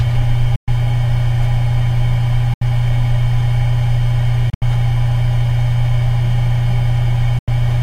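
Silent gaps at 0.56–0.68 s (116 ms), 2.54–2.62 s (73 ms), 4.50–4.62 s (102 ms in broken holes over 116 ms, longest 73 ms) and 7.39–7.48 s (87 ms) are likely Bluetooth dropouts. Late packets were discarded, so output cut out and resumed further along.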